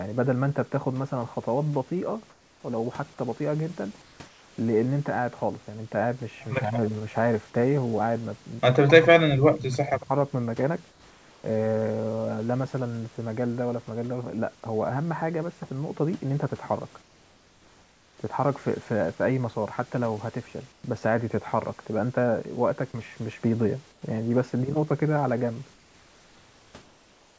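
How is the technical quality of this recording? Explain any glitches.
The recording has call-path faults: the background is repeatedly swapped for synthetic hiss, speech dips during double talk, and faint echoes leak through. Everything stops around 8 kHz, which fits a G.722 call codec, and the room noise sits about 34 dB below the speech.

Comfort noise in place of the background, at 2.30–2.64, 4.02–4.58, 10.90–11.44, 17.02–18.18, 20.72–20.84, 23.92–24.02 and 25.74–27.38 s: the pauses turn into a flat, featureless hiss, in most of them about 4 dB quieter than the real background. The likely cause is the sender halting transmission in silence while the receiver fills the gap with synthetic noise.

Speech suppressed in double talk, at 6.62–6.93, 8.85–9.08 and 9.36–10.10 s: the voice sags by roughly 10 to 20 dB in places. Both sides were likely talking, so the echo canceller turned everything down.

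Echo leak, at 8.73–8.79 s (about 117 ms delay) and 9.86–10.04 s (about 80 ms delay): a faint repeat sits roughly 20 dB under the speech. It is likely loudspeaker echo that the canceller failed to remove.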